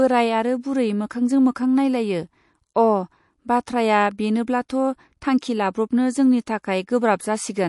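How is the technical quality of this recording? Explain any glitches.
The quality is compromised by MP3 compression throughout. The speech has no content above 11.3 kHz and sounds watery, likely from an encoder starved of bits. The damage fits a low bitrate near 48 kbps, where weak frequency lines flicker between frames.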